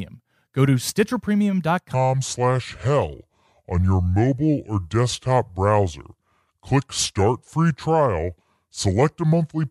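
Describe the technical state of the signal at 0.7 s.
At 0.7 s the speech signal is intact, with no audible fault at that moment.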